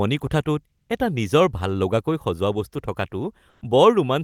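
It's a speech clip with comfort noise in place of the background twice: 0.77–0.89 s, just before "এটা নিজৰ ভাললগাকৈ", and 3.49–3.61 s. Each time, 120 ms of real background becomes flat, featureless hiss, about 3 dB different in level the first time, likely from Opus discontinuous transmission.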